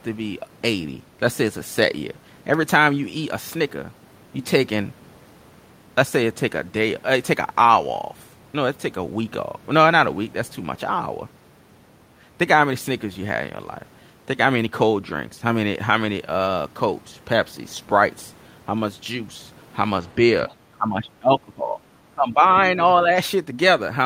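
Near the end of the speech, the level drops in four stretches: 20.77 to 21.81 s and 22.11 to 22.44 s, each sinking by something like 20 dB, then shallower dips of a few dB at 22.6 to 22.8 s and 23.02 to 23.11 s. This is speech suppressed in double talk, likely from an echo canceller that could not tell the near talker from loudspeaker echo while both sides were active, and so attenuated everything, leaving the speech chopped and receding.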